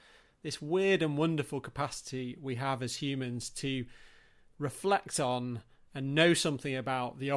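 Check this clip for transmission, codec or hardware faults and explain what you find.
No faults found anywhere in the speech; nothing to report.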